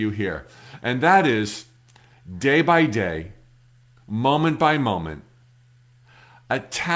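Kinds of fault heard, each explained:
Aliasing: the speech was resampled down without a proper anti-alias filter, so energy above the new 8 kHz limit folds back below it as false, unrelated tones. Throughout, sibilants sound gritty and metallic, with a faint folded haze roughly 30 dB under the speech, and the spectrum runs hard up to 8 kHz, which fits a drop from 48 kHz to 16 kHz. Plain band-limiting would sound dull and clean, with no added grit.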